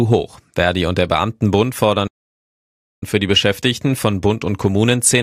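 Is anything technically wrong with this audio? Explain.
Yes. The speech has a playback stall. At 2.07 s the sound stops dead in mid-flow. The output stays silent for about 0.94 s, until 3.03 s. Then the speech picks up again. The gap is not a natural pause, because the sound is cut off abruptly rather than trailing away. The likely cause is the player running out of buffered data, or its playback thread being blocked, so nothing reached the output until it recovered.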